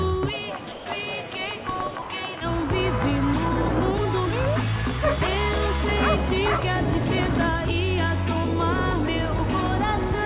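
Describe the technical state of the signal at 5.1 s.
At 5.1 s the audio is intact, with no fault at that moment, only the normal band limit of the WebRTC call path leaving nothing above 4 kHz, which fits a narrowband G.711 mu-law link.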